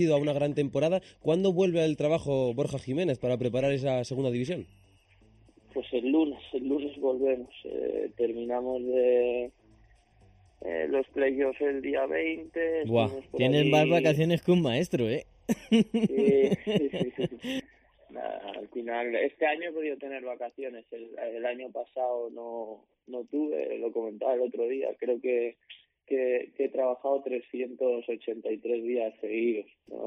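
From start to finish the audio sounds hollow and phasey: a fixed dip around 1.5 kHz, and further dips repeating at even spacing up the spectrum. This is channel delay (comb filtering). One channel arrives a fraction of a millisecond late, somewhere around 0.4 ms, and when the two are combined to mono, whatever they share cancels at those regularly spaced frequencies, carving a static comb of notches.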